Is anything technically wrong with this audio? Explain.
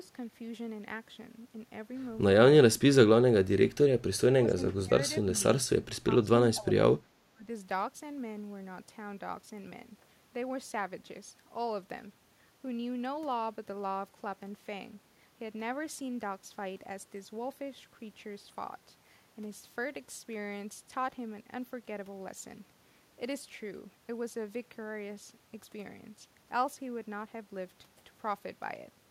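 Yes. There is speech suppressed in double talk at 2.71–2.96, 3.43–3.76, 4.32–4.58, 4.83–4.92, 5.34–5.43, 6.22–6.27, 6.53–6.77 and 7.33–7.45 s. The speech briefly dips or drops out, by as much as about 30 dB. This is likely an echo canceller clamping down while both sides talked. On the waveform these show as sudden notches, and on the spectrogram as short faded gaps.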